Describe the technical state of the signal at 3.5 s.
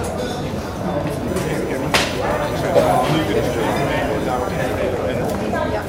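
At 3.5 s a USB whine sits under the sound, running from 1.28 to 4.67 s. It's a steady 1 kHz tone from USB frame current leaking in, roughly 20 dB down.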